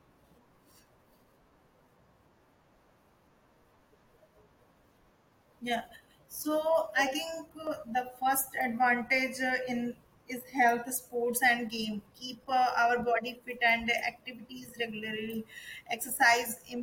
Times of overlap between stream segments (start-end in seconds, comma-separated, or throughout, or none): 3.67, 7.67, 15.64